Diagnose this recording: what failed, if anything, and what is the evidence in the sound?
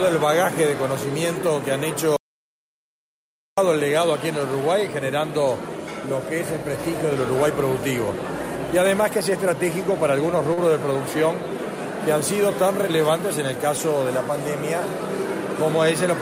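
Audio dropout to silence, at the input or capture link: from 2.16 to 3.58 s, about 1.41 s of sound vanishes into silence. No room tone survives, which rules out a quiet passage. The likely cause is a lost device or link while recording continued.

Short concealed packet loss, at the network stage: at 10.53 to 10.59 s, roughly 40 ms of audio never arrived, and about 35 ms was synthesized by extending the preceding sound before blending back. The result is a brief smear rather than silence, unlike the dropout.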